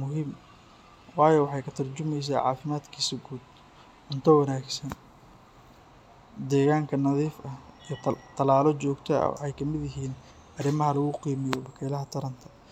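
No technical faults can be heard anywhere in the speech recording. There is nothing here that calls for a timestamp or a fix.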